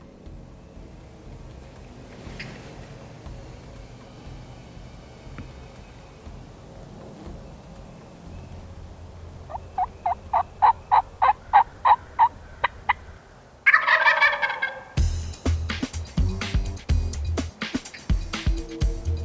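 Nothing here needs flagging; the sound runs along without a single technical hiccup worth pointing to.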